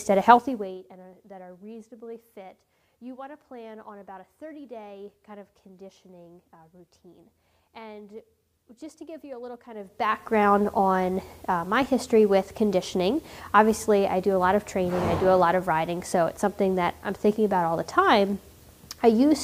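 A gain control moving in coarse 2 dB jumps with no smoothing causes zipper noise from 0.35 to 0.79 s, as the level drops by roughly 20 dB at around thirty steps a second. Each jump leaves a small click, so a fast ticking zip rides on the sound during the fade. The same fault returns from 9.68 to 10.36 s as the level climbs back about 20 dB, now nearer twenty steps a second, giving a slower ratchet.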